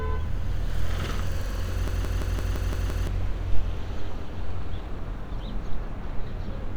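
From 1.88 to 3.07 s there's a system hang loop: a 170.67 ms chunk repeats seven times at about 5.9 Hz, a machine-gun stutter fitting an 8192-sample buffer.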